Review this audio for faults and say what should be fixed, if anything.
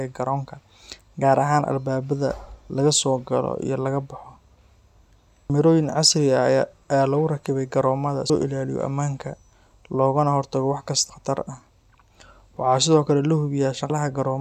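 Audio missing between chunks at 2.70 s (just before "laga soo"), 5.50 s, 8.30 s (between "lagu rakibay garoomada" and "ilaaliyo ammaanka") and 13.90 s: roughly a fifth of a second drops out and the edges butt together. The gaps likely come from chunk handovers, which fits 3-second chunks. To prevent it, buffer continuously across chunk boundaries, for example with double-buffering, so the next chunk opens before the current one closes.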